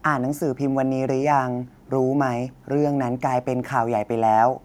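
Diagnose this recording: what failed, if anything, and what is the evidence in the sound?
Nothing failed; no stage of the chain shows audible trouble.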